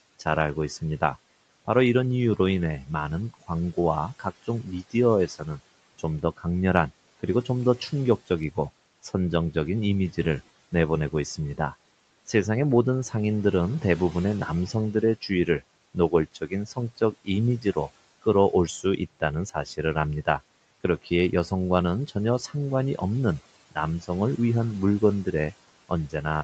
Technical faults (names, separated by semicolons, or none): speech cut by the noise suppressor